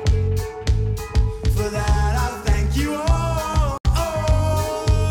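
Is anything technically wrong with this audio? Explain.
Yes. From 3.78 to 3.85 s the sound cuts out abruptly for about 73 ms, then resumes further along as if it had kept playing. That points to a likely Bluetooth dropout: packets, perhaps five, missed their delivery deadline and were discarded, leaving silence.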